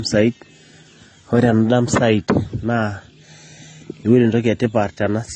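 Throughout the clip, likely transcoding between lossy codecs, a low-rate AAC pass followed by MP3, stacks two sets of smeary, swirling artefacts on the speech, with nothing above 9.5 kHz.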